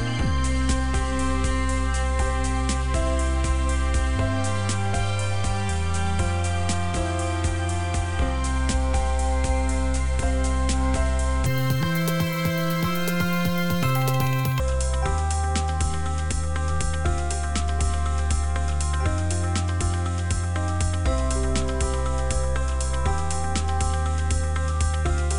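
From 11.46 to 14.60 s the audio is played back at the wrong sample rate, which fits 22 kHz material being run out at 44.1 kHz with no conversion. That stretch plays at twice the speed and a full octave, 12 semitones, higher.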